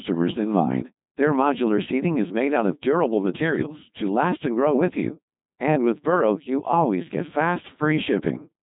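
Right from the start, the speech runs through a Codec 2 vocoder, rebuilt from sine waves at a rate that fits 2.4 kbit/s: robotic, buzzy, heavily mangled, with nothing above 3.8 kHz.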